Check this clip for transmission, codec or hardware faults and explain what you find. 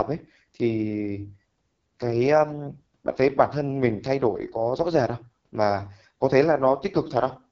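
One codec fault runs through the whole clip. AMR wideband (HD Voice) codec, throughout: the speech sounds rough and raspy, with nothing above about 7.4 kHz, which fits the lowest 6.6 kbit/s mode, where too few pulses reach the vocal-tract model.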